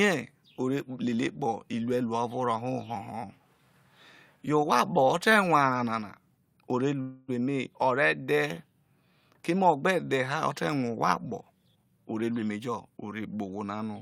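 A call audio freeze interrupts this speech recording from 7.01 to 7.30 s, right after "nana o re": the sound carries on as a fading buzz or hiss for about 268 ms instead of stopping, and then picks up exactly where it left off with nothing lost. That behaviour likely comes from packets stalling in transit until the jitter buffer ran dry, so the receiver stretched the last sound to fill the wait, adding 268 ms of delay. A jitter buffer speed-up follows from 11.64 to 12.89 s, where the audio plays at 120% speed with unchanged pitch and sounds rushed. The receiver was holding more buffered audio than it wanted, so it trimmed many short pitch-period-sized slices in quick succession, removing around 300 ms to pull the delay back down.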